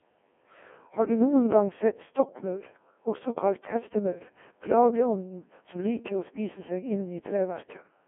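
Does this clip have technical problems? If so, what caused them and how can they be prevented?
Yes: throughout, Codec 2 vocoder damage makes the speech robotic and buzzy, resynthesised from pitch and envelope, consistent with a 1.6 kbit/s mode, band-limited to 250 Hz to 3.4 kHz. Prevent it with a higher-rate waveform codec.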